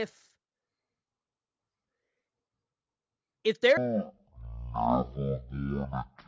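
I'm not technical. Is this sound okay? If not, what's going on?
No. From 3.77 s to the end at 6.27 s, the speech has a wrong sample rate fault: the audio is played back far slower than it was recorded, with no conversion. The slowdown fits audio recorded at 44.1 kHz being played at 16 kHz. The speech runs at about a third of its normal speed and drops about 17.6 semitones, nearly an octave and a half, so it sounds deep and dragged-out.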